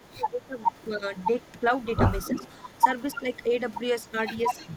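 From 0.00 to 0.58 s the speech dips hard, by about 15 dB at its deepest. This is speech suppressed in double talk. The echo canceller likely could not tell this talker from the far side at the same moment, so it turned everything down. A shorter dip of about 10 dB follows at 0.95 to 1.04 s. Milder ones of about 5 dB come at 2.30 to 2.44 s and 3.15 to 3.51 s. The speech sinks briefly, then recovers.

An echo leak runs from 0.04 to 1.86 s. A copy of the speech trails about 285 ms behind. It sits about 35 dB down, so it is faint. It returns from 2.19 s to the end at 291 ms. Now it is only about 20 dB down and clearly audible. The likely cause is a loudspeaker on one end. That side's echo canceller did not fully remove what its microphone picked up, and sent the remainder back.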